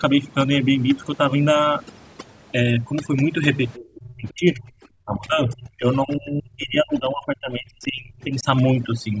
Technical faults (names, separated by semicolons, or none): overdone noise removal; other side's voice leaking through; speech suppressed in double talk